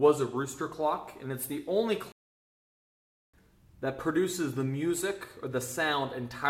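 A playback stall runs from 2.12 s to 3.34 s: the sound cuts out mid-flow and the output stays silent for about 1.22 s before resuming. The player most likely ran short of buffered data, or its playback thread was held up, until it recovered.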